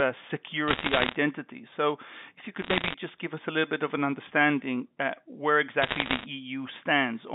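Bit errors on a digital phone line crackle through three bursts: 0.68 to 1.16 s, 2.62 to 2.94 s between "if you" and "just give us a", and 5.82 to 6.26 s after "of an understanding where". Flipped bits in the mu-law stream each corrupt a single sample, and hits on the sign or upper bits jump it far off, giving sharp ticks over intact speech. The first burst is the densest, near two percent of bits wrong, and the later two run somewhat lighter.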